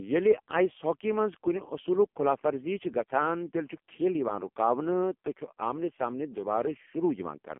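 Throughout, AMR narrowband mobile codec damage at 5.15 kbps confines the speech to 200 Hz–3.4 kHz, nothing above 3.5 kHz, with a buzzy, synthetic texture that plain band-limiting lacks.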